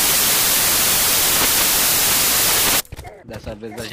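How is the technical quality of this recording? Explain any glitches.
The technical quality is poor at the start. From 0.0 to 2.8 s the samples are built from the wrong bytes: the reader misassembles each sample's bytes, so the rapidly changing low bits dominate. This produces loud, harsh noise, close to white on loud passages, unlike steady background hiss, which sits beneath the sound at a constant level.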